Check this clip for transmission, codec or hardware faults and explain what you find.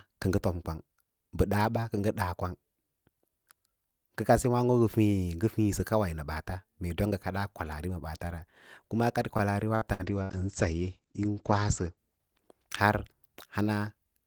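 Two transmission faults sit close together near the end of the speech, one running straight into the other.

From 9.37 s to 10.32 s the sound turns choppy, with small pieces dropping out. This is repeated packet loss. Four gaps open in under a second, the longest 61 ms. Each is patched by extending the last received sound, so about a fifth of that stretch is synthesized filler rather than real audio.

Starting at 10.11 s, overlapping the end of the loss, the sound goes muffled, losing its brightness until about 12.81 s. This is a call bitrate drop. The bandwidth estimate fell and the encoder cut from 32 kbps to 12 kbps, holding the lowest rate for about 1.6 s. At that rate it codes more coarsely and cuts the audio off at 8 kHz instead of 20 kHz, which takes out the crisp top end.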